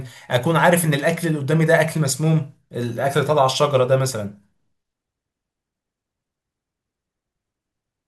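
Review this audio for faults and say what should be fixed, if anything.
A single sharp click at 3.26 s in the speech, too brief to remove any sound. The likely cause is dropped samples: a handful, well under a tenth of a millisecond, missing from the stream, so the waveform jumps abruptly between values. Preventing it means keeping the capture and processing path free of buffer underruns, with adequate buffer sizes and stable clocking.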